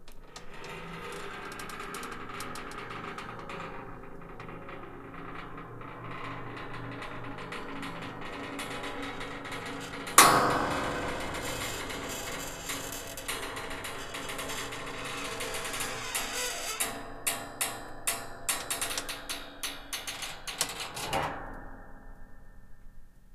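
Nothing goes wrong at any point in this recording of sounds, so there's no technical fault to point to anywhere along it.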